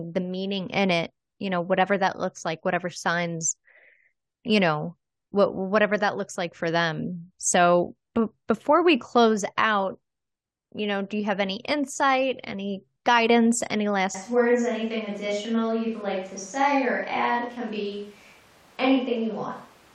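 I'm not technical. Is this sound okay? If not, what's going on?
No. From 14.15 seconds to the end there's a switch to a distant microphone. The voice suddenly turns roomy and hollow, with less bass. The close mic likely dropped out and a farther one took over. Loudness stays about the same, with faint background noise.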